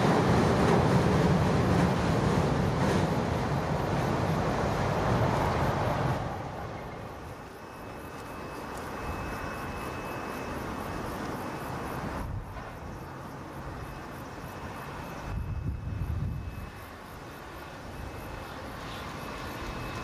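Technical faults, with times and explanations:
No technical faults can be heard anywhere in the signal.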